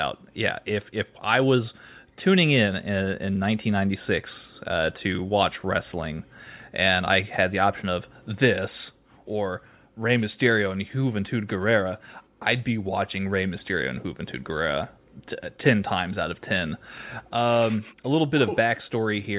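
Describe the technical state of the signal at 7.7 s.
At 7.7 s the speech signal is intact, with no audible fault at that moment.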